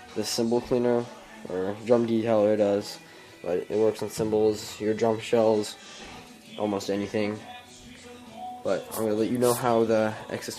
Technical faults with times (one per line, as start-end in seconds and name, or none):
none